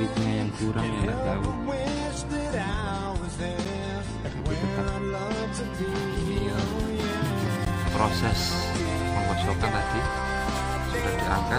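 At 3.65 s and again at 7.65 s there's a gap between stream segments, about 9 and 14 ms of hard-edged silence where segment timestamps don't quite meet, four seconds apart.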